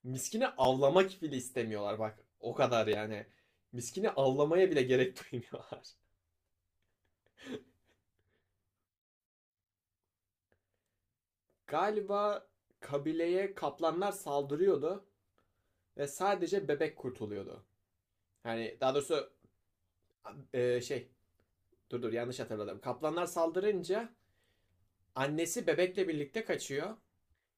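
Right near the start, at 0.64 s, there's a repeated buffer: new audio didn't show up in time, so the device played back the last chunk once more. The repeat is tiny, which fits a buffer of about 10 ms, so it comes across as a quick click or brief buzz rather than a stutter, with a hard seam where it rejoins. The same thing happens again at 2.93 s, and each time roughly 10 ms of the speech gets skipped.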